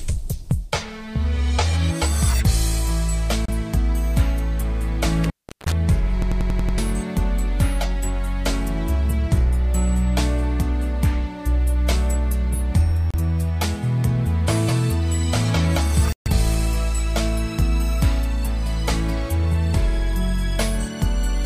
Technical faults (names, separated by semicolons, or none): Bluetooth stall; intermittent contact; system hang loop